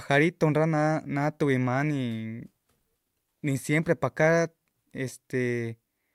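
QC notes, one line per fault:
Nothing stood out on listening to the speech.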